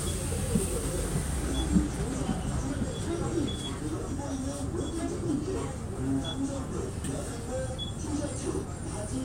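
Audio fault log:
No technical faults can be heard anywhere in this sound recording.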